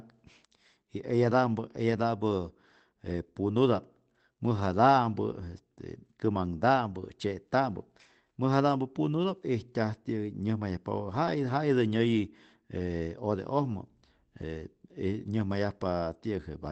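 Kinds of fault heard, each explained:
Lost packet rebuilt from error correction: brief rough, noisier patches at 1.91–1.93 s, 4.57 s and 11.23–11.29 s, with no gap, where missing audio was filled from a low-bitrate copy carried in the next Opus packet. The last patch fits two lost packets.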